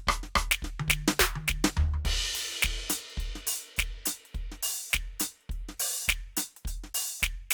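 No technical faults are audible.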